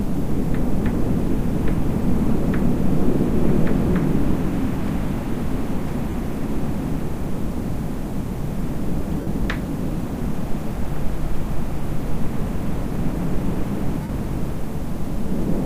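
An everyday-sound recording with lost LE Audio frames: the Bluetooth link dropped audio at 2.02 s, 6.10–6.14 s, 9.21–9.27 s and 14.02–14.09 s (15 to 68 ms). The LC3 decoder filled each gap by replaying the last spectrum with scrambled phase, so the sound briefly smears into noise and, in the longer gaps, fades toward silence.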